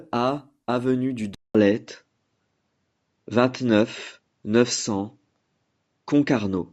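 At 1.35 s the speech drops out for about 200 ms, then returns with a different character that lasts to the end of the clip. From that point nothing is present above 7.6 kHz, so the sound turns duller and boxier. The level shifts by roughly 5 dB, and a faint new background noise sits far beneath the speech. The likely cause is an input switched to a poorer device partway through recording.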